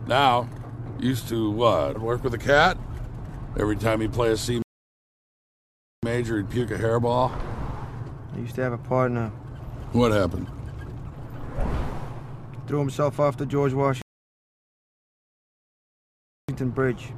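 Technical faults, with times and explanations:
4.62 to 6.03 s and 14.02 to 16.49 s, rebuffering stall: the audio stops dead and falls silent for about 1.4 s and then about 2.5 s. Each time it picks up at exactly the point where it broke off. The player used up the audio it had downloaded and had to wait for more data before carrying on. Nothing is skipped, so the gaps simply add time to the playback.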